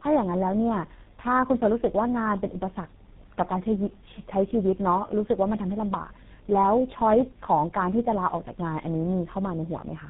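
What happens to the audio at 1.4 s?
At 1.4 s the speech carries tandem speech coding, present throughout the clip: each speech coder re-encodes the previous one's degraded output, so the sound turns rough, muffled and warbly. A spectrogram shows a hard ceiling near 3.9 kHz and smeared, unsteady formant bands.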